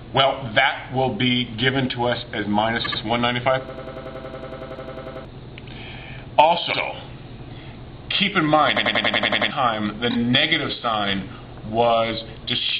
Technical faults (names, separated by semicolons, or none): repeated frames; system hang loop